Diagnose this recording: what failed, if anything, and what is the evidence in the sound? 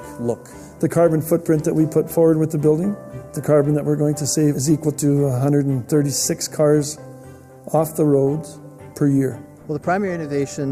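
Nothing in the recording points to a failure at any stage of the signal chain. There is no audible evidence to diagnose, so no stage calls for attention.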